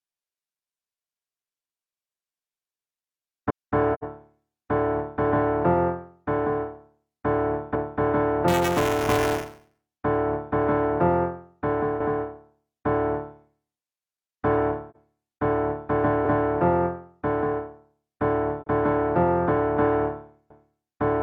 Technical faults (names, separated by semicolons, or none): overlapping chunks; AAC frame loss with muting; buffer tearing